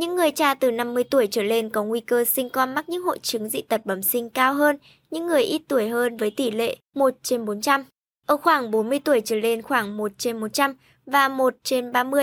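No technical faults can be heard anywhere in the speech.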